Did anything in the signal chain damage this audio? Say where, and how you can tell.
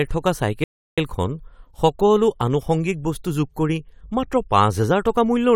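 Yes: a rebuffering stall at playback. Speech drops to silence from 0.64 to 0.98 s, then resumes exactly where it stopped, adding 0.34 s while the player waited for data.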